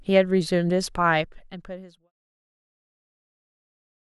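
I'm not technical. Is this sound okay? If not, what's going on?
Yes, nothing is wrong with this speech clip: the level eases down in a smooth fade-out from roughly half a second to 2.12 s, the way an editor would do it, with no click or hard edge.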